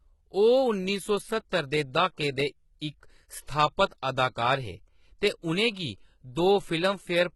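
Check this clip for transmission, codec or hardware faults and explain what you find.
One fault runs through the whole clip: heavy HE-AAC compression. The treble in this speech sounds synthetic, and s sounds come out gritty and lispy. The cause is likely spectral band replication, consistent with roughly 16 kbps. The codec keeps only the lower spectrum and rebuilds the top by copying lower bands upward. On a spectrogram the upper band shows blurred, repeated patches whose harmonics don't line up with those below, and nothing appears above 11.8 kHz.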